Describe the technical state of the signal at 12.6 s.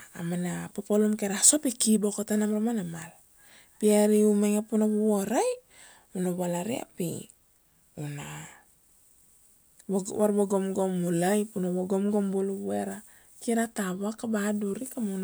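At 12.6 s the speech signal is intact, with no dropout, clipping, glitch or other fault audible at that moment.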